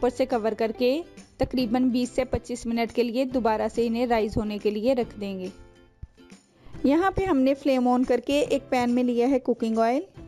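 The audio was raised from a 16 kHz rate to 44.1 kHz by straight-line interpolation between samples, and that crude filtering leaves imaging from linear upsampling across the whole clip. The original band tops out near 8 kHz and sounds dulled there, while a faint mirrored copy of the spectrum sits between 8 and 16 kHz, roughly 35 dB down, lending sibilant and high-pitched moments a thin metallic shimmer.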